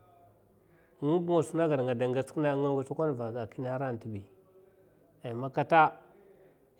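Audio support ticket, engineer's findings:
No faults found in the speech recording. Nothing to trace or escalate on this ticket.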